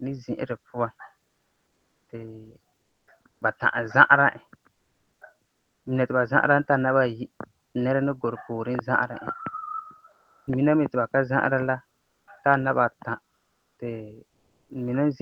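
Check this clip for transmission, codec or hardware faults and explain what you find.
Yes, there are two related faults, both likely from discontinuous transmission, probably Opus DTX.

Comfort noise in place of the background shows up at 1.27 to 3.41 s, 4.73 to 5.85 s, 10.11 to 10.47 s, 11.99 to 12.27 s and 13.37 to 14.69 s. The sender goes quiet in the pauses, so the receiver fills them with flat synthetic hiss instead of the real room. At 10.1 s the level drops about 9 dB, and at 12.0 s about 3 dB.

The onset is clipped by the voice detector at 3.39 s. The detector was about 20 ms late catching the speech restarting, so its soft start is lost and it kicks in abruptly.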